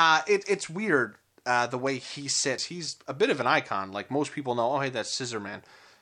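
A CD skip occurs at 2.58 s, right after "uh the way he" and just before "he's a bit of". A knock or a surface flaw threw the laser off its track onto a neighbouring turn of the disc's spiral. The player muted for only a few milliseconds, which is heard as a small tick, and then resumed from a different point, so the speech jumps abruptly by a multiple of one disc revolution instead of continuing where it left off.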